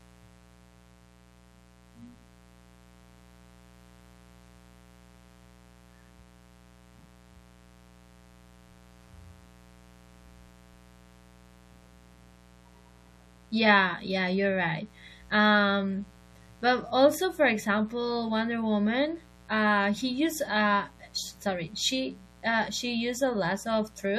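Mains buzz runs through the whole speech recording, a steady, raspy drone sitting roughly 30 dB below the speech. Switching spikes from a 60 Hz supply leak in twice per cycle, so a spectrogram shows evenly spaced horizontal harmonic lines reaching several kHz, while the waveform carries spikes repeating at 120 Hz.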